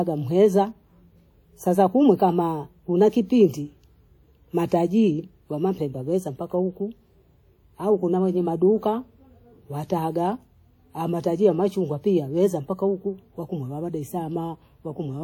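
Throughout the speech, plainly audible codec damage is heard, likely WMA compression. Quantisation noise smears across long transform blocks, so sounds ring and wash. A hiss breathes with the signal. The damage fits a bitrate near 48 kbps, though content reaches 20.1 kHz.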